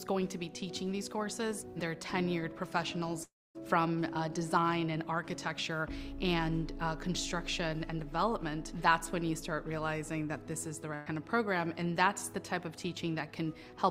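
A long network dropout from 3.23 to 3.58 s: the last sound continues as a fading buzz or hiss, then silence, and about 0.32 s of audio is lost, likely from packets not arriving. A burst of packet loss from 10.95 to 11.09 s: roughly 120 ms never plays, and the receiver stretches the preceding sound into a fading fill before resuming further on.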